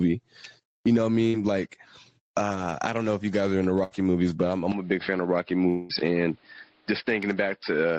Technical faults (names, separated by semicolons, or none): gain pumping; burst of packet loss; short concealed packet loss; long network dropout